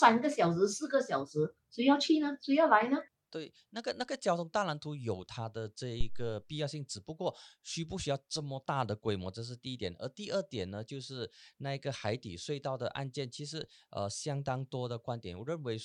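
At 6.01 s a phantom power thump breaks into the speech. It is a deep, low thud that dies away by 6.42 s. Its peak reaches about -19 dBFS. The decay takes about 92 ms. The cause is a supply being switched on or off while the input was live. The voltage step passed through the coupling capacitors and reached the recording as this single low-frequency bump.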